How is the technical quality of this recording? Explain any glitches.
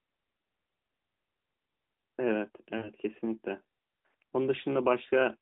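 The one real glitch is a short burst of lost AMR speech frames from about 2.78 to 2.90 s, with roughly 60 ms of audio gone, which fits three 20 ms frames dropped in a row. When frames fail their checks, the decoder keeps reusing the last good pitch and vocal tract settings while turning the gain down, so you hear the speech smear and stretch briefly, sag toward quiet, then come back a bit thin and rough. The narrowband phone band underneath is audible throughout.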